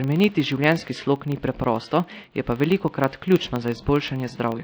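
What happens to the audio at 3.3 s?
At 3.3 s the speech carries the same two faults that run through the whole clip. The first is generation loss: the sound is swirly, hollow and smeared, with softened attacks. That's likely from around five lossy re-encodes, which fits a WMA-style codec near 96 kbit/s, each pass adding its own quantisation noise and spectral holes.

The second is a filter restarted on every block. With no memory carried over, each block starts from silence with a small transient. Here that gives a 25 Hz buzz, blocks roughly 40 ms apart, that rises and falls with the speech level.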